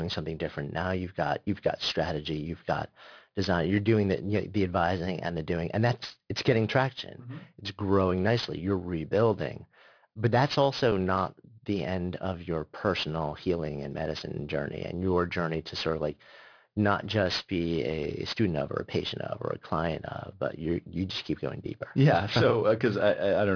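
Aliasing runs through the whole clip: the audio was resampled to a much lower rate with no anti-aliasing filter ahead of it, which fits a drop from 48 kHz to about 11 kHz. Speech energy above the 5.5 kHz folding point mirrors back down into the band at unrelated frequencies, sitting roughly 15 dB below the speech. Sibilants come out gritty and metallic, and the spectrum stays dense right up to 5.5 kHz instead of rolling off.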